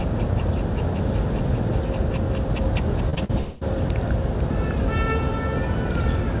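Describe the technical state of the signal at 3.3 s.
Around 40 ms of the call's packets failed to reach the decoder in time between 3.24 and 3.31 s. The receiver concealed the short packet loss by extending the preceding sound for about 44 ms, then blending back, leaving a brief smear or wobble in the 4 kHz-limited audio.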